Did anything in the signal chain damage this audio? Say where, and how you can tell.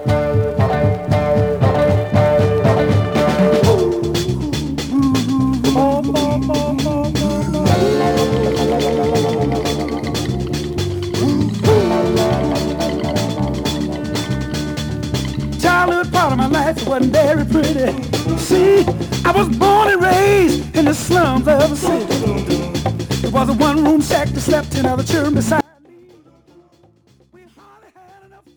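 Yes, there's an audio dropout to a faint residue near the end. At 25.61 s the signal cuts out abruptly, with no fade, and only a faint trace remains, roughly 35 dB below the normal level, through to the end of the clip. Because something still leaks through rather than dropping to true silence, the likely culprit is the analogue wiring: a connection that partly let go while the downstream input stayed live and kept picking up that weak residue.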